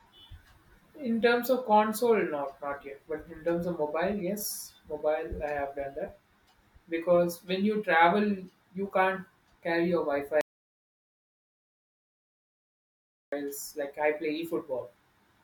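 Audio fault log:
10.41–13.32 s, audio dropout to silence: the speech cuts to dead silence with no room tone for 2.91 s, resuming at "like I", likely from an input lost while silence kept recording.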